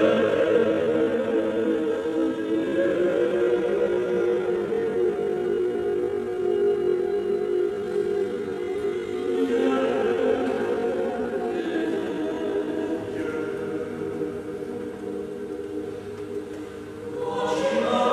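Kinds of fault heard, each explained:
Time-stretched section: Until 12.68 s the sound runs at 0.583 times normal pace, pitch unchanged. It drags, likely from software stretching.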